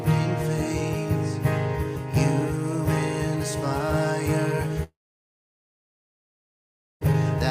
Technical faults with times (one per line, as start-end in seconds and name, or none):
4.83-7.03 long network dropout